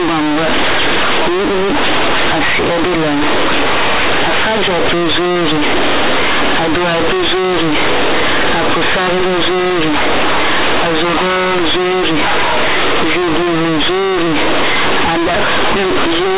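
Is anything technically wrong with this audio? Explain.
Yes. Throughout the speech, companded audio is read as linear: mu-law bytes play as plain 8-bit samples, unexpanded, so quiet sounds come out as large as loud ones. It sounds buzzy and distorted, with loud noise in pauses. The waveform looks like a solid slab, and the spectrogram shows dense broadband hash up to the 4 kHz telephone limit.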